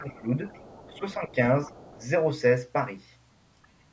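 From 0.00 to 0.27 s the talker's speech dips by up to roughly 15 dB, with about a fifth of a second audibly pulled down. This is speech suppressed in double talk: an echo canceller likely could not tell the near talker from loudspeaker echo while both sides were active, so it attenuated everything. A faint trace of the other side's voice leaking through also sits under 0.10–0.15 s, roughly 30 dB below the speech.

From 0.47 to 1.00 s that leak is stronger, a second voice around 25 dB down. Residual loudspeaker signal that the canceller likely failed to subtract reached the microphone. Suppression returns at 0.91–1.35 s, a dip of about 10 dB lasting around a third of a second. The leak reappears at 1.66–2.04 s, again near 25 dB down, with a brief, slight dip of about 5 dB at 1.67–1.73 s. A last, very faint scrap, some 40 dB down, shows at 3.62–3.68 s. Throughout, the call path's band limit leaves nothing above 8 kHz.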